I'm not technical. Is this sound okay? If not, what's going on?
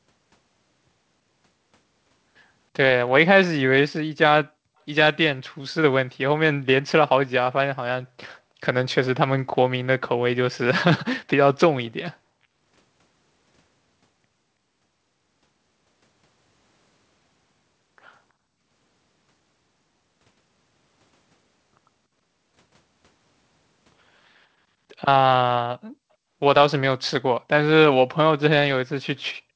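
No. At 11.86 to 11.91 s there is a brief echo leak: a very faint copy of the speech returns about a third of a second late. Likely, the other side's loudspeaker was picked up by its microphone, and its echo canceller missed this scrap.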